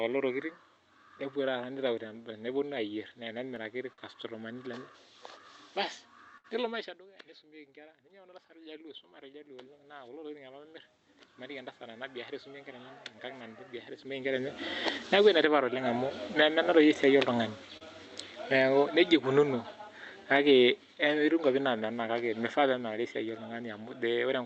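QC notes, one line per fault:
3.93 and 17.77 s: short stall from a late packet. A packet arrived late, the jitter buffer emptied, and the last sound was held for about 47 ms and 38 ms, then resumed with nothing lost.
6.38 to 6.47 s: burst of packet loss. About 60 ms of audio never arrived; the receiver filled the gap by extending and fading the last sound, then skipped ahead past the missing part.
7.2 to 13.6 s: automatic gain rising. The input dropped by about 22 dB, close to where the talker shifts position, and the gain control slowly added about 15 dB, swelling sound and background together.
14.9 s to end: automatic gain falling. Gain is eased downward across the rest of the clip, sinking sound and room noise together; a separate rise of about 10 dB runs from 15.5 to 16.9 s.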